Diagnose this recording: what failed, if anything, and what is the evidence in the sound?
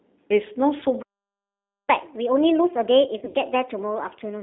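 The whole thing has gone through a G.729 codec at 8 kbit/s, so the codec stage is the first culprit. The band sits between 250 Hz and 3.6 kHz, and the speech has that rough, slightly synthetic edge from rebuilding it out of a pitch predictor and a handful of pulses per frame.

From 1.90 s to the end, playback is in catch-up at higher speed, about 1.25x, with the pitch pushed up roughly four semitones. That's the jitter buffer after a stall, resampling its backlog faster to win back the lost time.

On the network side, there's VoIP packet loss concealed by the speech codec between 3.19 and 3.36 s. About 100 ms went missing, scattered over 160 ms with a longest gap of 60 ms, which fits five 20 ms packets. The decoder papered over it by extrapolating the last pitch and filter, so you get a buzzy or noisy, fading smear.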